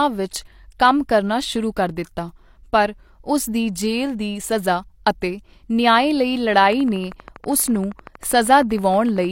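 From 6.65 s to 9.26 s a train of clicks runs over the speech, most likely from electrical interference from nearby equipment or a faulty connection or power supply injecting a short pulse into the signal again and again. The pulses arrive at a regular 12.7 per second, around thirty in all, each with much the same shape and reaching about the level of the speech. They are heard as a steady ticking laid over the talking that continues through the pauses.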